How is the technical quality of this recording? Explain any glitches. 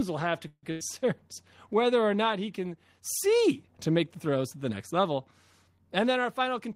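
The recording has three network glitches. Two come close together near the start, and one comes near the end.

At 0.47 to 0.65 s, just after "will have to", there is a call audio freeze. The last sound is stretched into a fading buzz or hiss for about 155 ms. About 50 ms of that is silence. The likely cause is delayed packets that left the jitter buffer empty. Nothing is lost. The speech simply resumes later, now running 155 ms behind.

At 0.71 to 0.83 s, still after "will have to", comes a burst of packet loss. Several packets in a row never arrived in time. The receiver filled about 96 ms by holding and fading the last sound. When the speech returns, about 100 ms of it is gone. The result is an audible jump, not just a pause.

From 5.89 to 6.70 s there is a jitter buffer speed-up. Too much audio had piled up in the buffer. To cut the delay, the receiver clipped out tiny pitch-period slices again and again. 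In all, about a tenth of a second was removed. The speech plays at 111% speed with its pitch unchanged, so it sounds briefly rushed.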